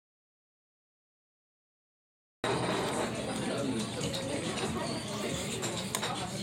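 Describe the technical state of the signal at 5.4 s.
At 5.4 s the audio is intact, with no fault present at that moment.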